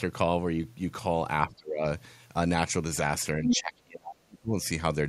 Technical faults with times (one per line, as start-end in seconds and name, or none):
1.43-1.86 speech suppressed in double talk
3.35-4.53 speech suppressed in double talk
3.48-3.57 other side's voice leaking through